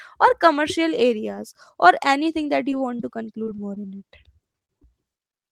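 A speech recording with dropped audio that the receiver has patched over. Short concealed packet loss shows up as isolated smears or wobbles at 2.71 s, 2.97–3.00 s, 3.02 s and 5.30–5.34 s. In each case a few hundredths of a second never arrived and were filled by extending the preceding sound. Because each gap stands alone and the real audio resumes cleanly afterwards, these read as single blips. Between 3.44 and 4.85 s the holes come back to back, about a dozen of them, with the longest near 36 ms and roughly a seventh of that stretch synthesised. That is repeated packet loss, and the constant patching turns the speech choppy, with pieces missing, rather than momentarily smeared.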